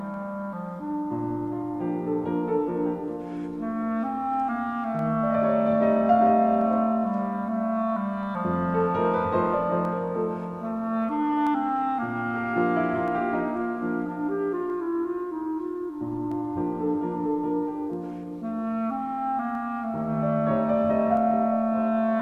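From 0.14 s to 21.17 s, a click recurs every 1.62 s, about fifteen in all. This is the pattern of clock drift buffer slips, likely from two devices running on independent clocks that disagree by roughly 100 parts per million. The buffer between them drifts until a handful of samples, perhaps seven, is dropped or repeated. The strict, even spacing separates these slips from random dropout clicks or crackle.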